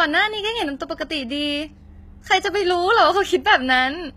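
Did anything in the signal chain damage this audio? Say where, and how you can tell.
Yes. Throughout the speech there is plainly audible codec damage, likely from HE-AAC compression. The treble is rebuilt by copying lower harmonics upward under a coarse envelope, so s sounds turn gritty and metallic. Nothing reaches above 14.9 kHz, and the texture fits roughly 20 kbps.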